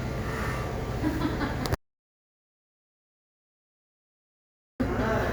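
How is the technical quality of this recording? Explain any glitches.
The recording has one serious glitch: an audio dropout to silence from 1.75 s to 4.80 s. The sound cuts off abruptly into silence, with no room tone, for about 3.05 s, then resumes mid-flow. The likely cause is a lost input, such as a disconnected device or stray mute, while the recorder kept writing silence, so that stretch of audio is gone.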